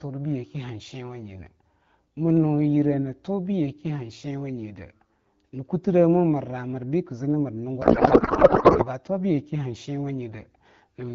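At 7.81 s, right after "kii zii na mir", the speech collapses into garbled noise and warble. This is a codec payload misread. The frames were packed octet-aligned but decoded as bandwidth-efficient AMR. Every field lands in the wrong place, yet the frames still look valid. The result barely tracks the talker. It ends at 8.87 s, before "tuwa bu yake". Around it, the AMR wideband (HD Voice) codec sounds lightly coded, consistent with roughly 12.65 kbit/s.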